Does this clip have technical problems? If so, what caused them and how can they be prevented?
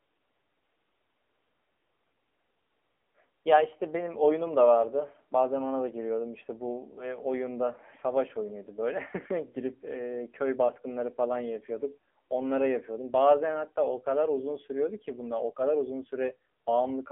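Yes. The whole clip carries AMR narrowband mobile codec damage: nothing above 3.5 kHz, a thin 300 Hz to 3.5 kHz line band, and a heavily buzzy, synthetic quality to the speech, which points to a low AMR-NB mode around 6.7 kbps squeezing the vocal-tract model hard. To prevent it, record locally or over a wideband path rather than through a narrowband mobile call.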